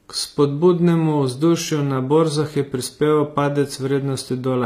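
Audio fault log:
Throughout, HE-AAC compression: the speech has a bright but synthetic top end, with s sounds turning gritty and metallic, plainly audible damage, and nothing at all above 15.5 kHz. The likely cause is an HE-AAC v2 encode at a low rate, which fits roughly 24 kbps. The codec keeps only the lower band and fakes the treble by copying lower bands upward under a coarse envelope, so the upper harmonics no longer match the real ones.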